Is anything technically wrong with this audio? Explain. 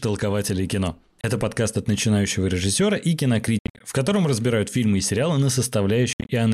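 Yes. Speech cuts to silence three times, at 1.21–1.24 s, 3.59–3.81 s and 6.13–6.29 s, likely Bluetooth dropout: packets arrived too late and were discarded. The first gap is a single 27 ms hole. The later two are clusters of holes, about 160 ms and 120 ms of sound lost in total, each with a longest gap of 67 ms. Speech resumes as if it had played on underneath.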